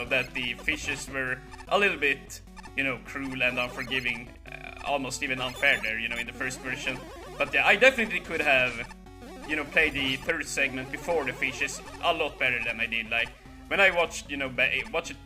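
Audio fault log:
throughout, sample clock jitter: the converter's clock wanders by roughly a microsecond or two, so samples land slightly early or late. The error tracks waveform slope, adding a rough hiss about 35 dB below the sound that swells on loud, bright passages and vanishes in silence.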